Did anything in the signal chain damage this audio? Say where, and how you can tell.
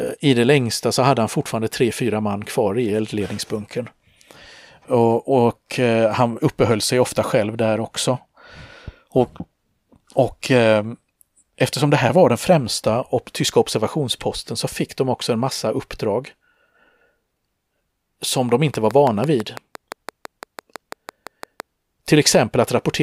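Yes. A train of clicks runs from 18.74 s to 21.61 s, close to the end of the speech. There are about twenty near-identical clicks, spaced regularly at 5.95 per second. They peak about 10 dB above the signal, so they tick clearly through both the speech and its gaps. Near-identical shape and steady pacing point to something external injecting pulses. The likely cause is interference from nearby equipment or a faulty connection or power supply at the analogue wiring or converter stage.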